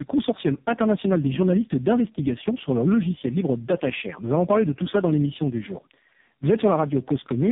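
Throughout, the speech sounds rough, muffled and warbly, with nothing above 3.7 kHz. This is tandem speech coding: the call was decoded and re-encoded at each link, passing through AMR-NB, then CVSD, then AMR-NB again, each coder working on the last one's damage.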